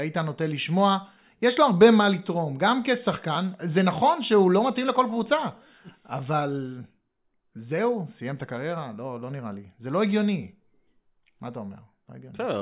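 No technical faults are audible.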